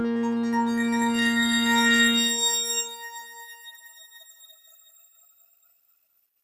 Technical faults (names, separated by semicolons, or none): noise suppressor applied to music or sounds